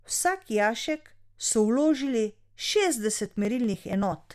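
From 3.26 s to 4.22 s the speech carries periodic USB or driver dropouts. Every 0.096 s a short slice of audio, roughly 4 ms, goes missing and is skipped rather than padded with silence, so the waveform jumps straight to later material. That is consistent with a background task stalling the USB bus or audio driver on a fixed schedule. The result is a train of about ten evenly spaced ticks, heard only while the speech has signal.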